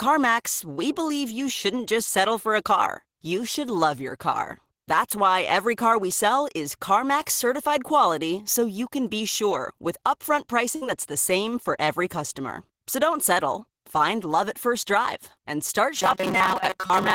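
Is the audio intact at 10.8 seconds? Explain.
No. From 10.75 to 10.84 s, just after "be sure with upfront", a burst of packet loss interrupts the speech. The receiver covers about 60 ms by extending the last sound and fading it, giving a brief held buzz or dimming hiss. The speech then resumes with roughly 60 ms skipped. Unlike a plain dropout, the gap is filled rather than silent, and unlike a glitch or click, the following sound returns further on.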